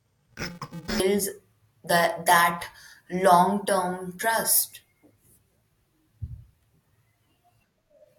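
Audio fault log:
0.0–1.0 s, interleaved audio read as planar: the speech turns dull and robotic, buzzing at 345 Hz, the rate of 2.9 ms blocks, which fits a 128-sample block split into false left and right halves. Unlike a pitch-shift fault, there is no octave drop.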